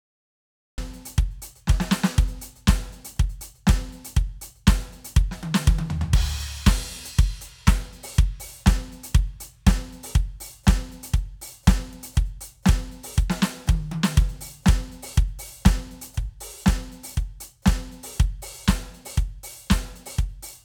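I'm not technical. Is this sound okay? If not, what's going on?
No. There's a cut-off start: about 0.78 seconds of dead silence, then the music jumps in mid-sound, because the recording began a moment too late.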